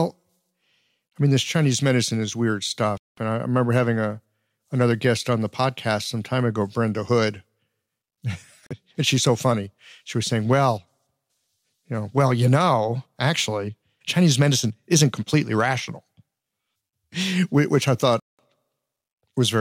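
At 2.98 s, right after "medicine is weird", the speech cuts to silence for about 0.2 s; at 8.67 s a 41 ms gap falls just before "she's so funny"; at 18.20 s, after "which I", another gap lasts about 0.19 s. Each is likely a Bluetooth stall: delayed packets emptied the headphone buffer and playback paused until resent data arrived. Unlike a crackle or a concealed dropout, these are clean silent holes with no smeared or repeated sound, after which the speech picks up again.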